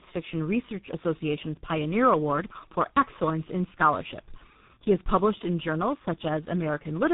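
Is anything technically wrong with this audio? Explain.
Yes. Throughout the speech there is tandem speech coding. The call was decoded and re-encoded at each link, passing through four speech codecs in a row, ending at G.723.1 at 6.3 kbit/s. Each coder compounded the last one's damage, leaving rough, muffled, warbly speech. A spectrogram shows nothing above 3.8 kHz and smeared, blotchy harmonics.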